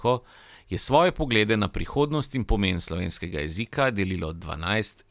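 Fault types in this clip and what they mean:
No technical faults are audible anywhere in the speech.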